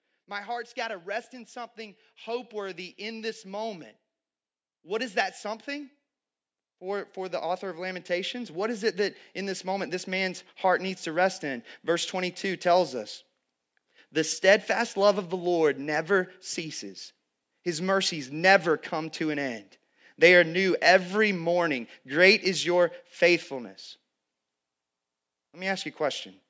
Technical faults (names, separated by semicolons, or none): automatic gain rising